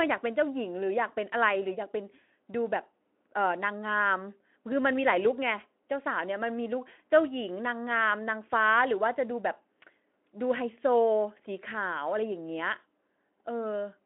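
No technical fault stands out anywhere in this speech recording. What comes through is telephone-band audio from roughly 250 Hz to 3.4 kHz with nothing above about 3.8 kHz, plus a light coarseness consistent with a working Speex link at a moderate setting.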